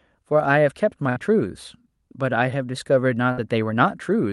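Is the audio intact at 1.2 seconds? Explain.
No. A burst of packet loss runs from 1.09 to 1.19 s. The receiver extended the last sound for about 64 ms while fading it, then resumed near 1.2 s with about 60 ms of audio skipped, so the sound jumps ahead abruptly.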